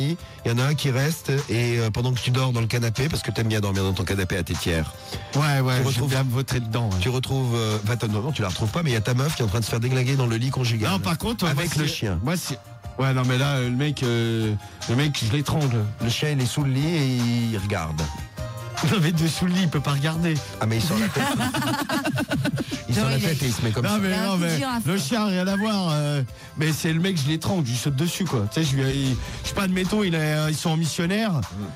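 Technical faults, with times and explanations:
No technical faults can be heard anywhere in the recording.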